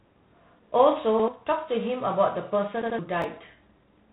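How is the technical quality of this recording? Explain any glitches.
The recording has clear technical damage: constant codec degradation across the whole clip plus three short timing glitches.

Throughout, the speech goes through G.726 ADPCM at 24 kbit/s. The codec sends only a few bits per sample describing how the signal differs from a running prediction, so quantisation noise is high. It shows up as a rasping hiss that rises and falls with the speech level, unlike steady background noise, and nothing above 3.9 kHz comes through.

At 1.20 to 1.28 s there is a repeated buffer. New audio arrived late, so the playback device played the previous block once more. The repeat lasts about 85 ms, which fits a 4096-sample buffer, and roughly a tenth of a second of real audio is lost. The result is a brief stutter with a hard join, where the same fragment is heard twice rather than smeared or dropped.

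A second repeated buffer comes at 2.82 to 2.99 s. Here the same 85 ms block plays two extra times, so it sounds three times in a row with a hard join at each repeat. This replaces around 150 ms of real audio, so the stutter is longer than the first one.

At 3.22 to 3.24 s there are chunks out of order. A 5.33 ms chunk was written three chunks late, so it plays after the chunks that should have followed it. No audio is lost, but the sequence is scrambled and there are three hard joins. It sounds like a tiny jumbled moment rather than a repeat, because nothing is heard twice.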